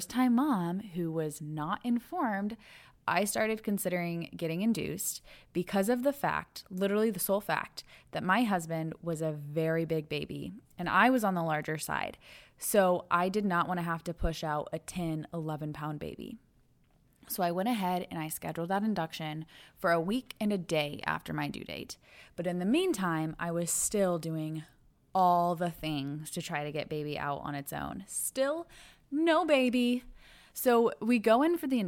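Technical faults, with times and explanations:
No technical faults detected.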